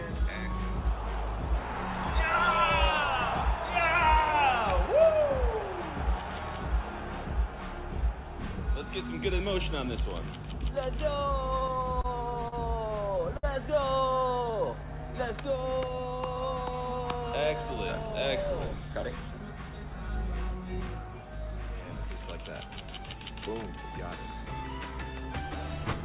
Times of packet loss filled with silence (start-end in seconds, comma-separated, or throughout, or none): none